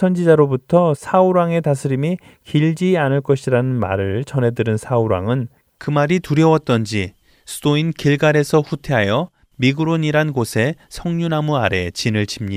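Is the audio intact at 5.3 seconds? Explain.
Yes, the audio is intact at 5.3 seconds, with no fault at that moment.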